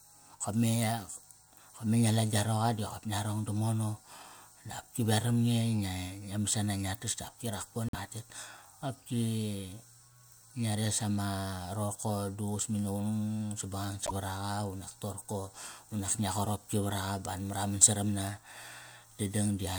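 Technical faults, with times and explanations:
7.89–7.95 s and 14.05–14.12 s, broken MP3 bit reservoir: right after "tas dap ki", and again later, the sound skips forward with a glitch of about 60 ms, roughly three 24 ms frames. This is likely a cut in the MP3 stream. The following frames looked back for borrowed bytes and decoded the wrong data. A plain dropout would leave a clean gap without this jump ahead in the audio.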